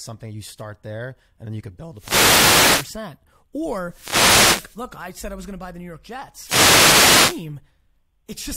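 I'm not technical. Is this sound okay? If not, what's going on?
No. This speech has three wireless microphone noise hits, heard as bursts of static swishing over the voice: from 1.94 to 2.95 s, just after "then you could build"; from 3.82 to 4.86 s, just before "I said I was"; and from 6.34 to 7.49 s. Each lasts about a second. The radio link from the microphone briefly fades, and the receiver's own hiss rushes in and partly covers the voice until the signal recovers.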